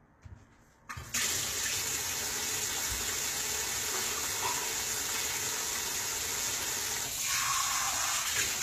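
HE-AAC compression runs through the whole clip, likely the cause of the plainly audible damage. The lower spectrum is coded sparsely and the treble is rebuilt from copied lower bands, so the highs sound synthetic and misaligned, cut off above 14.9 kHz, which fits roughly 20 kbps.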